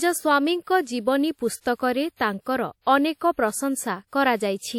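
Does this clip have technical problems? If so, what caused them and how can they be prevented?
Yes. The speech shows pre-echo four times: a short hiss or smear leads into sharp onsets at 1.61 s (spreading about 51 ms), 2.16 s (37 ms), 2.40 s (59 ms) and 2.82 s (50 ms). A transform codec spread the quantisation noise meant for each loud attack across its whole block, so it leaked into the quiet moment before the onset and softened the attack. Using a higher bitrate or a codec with working block switching to short windows on transients prevents this.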